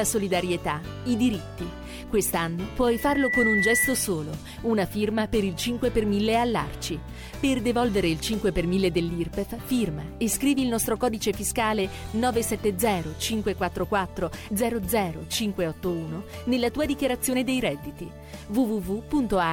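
Loudspeaker feedback squeal from 2.87 to 4.12 s: a 2 kHz tone swells over roughly half a second to about 5 dB above the sound, as the microphone re-amplifies its own loudspeaker output.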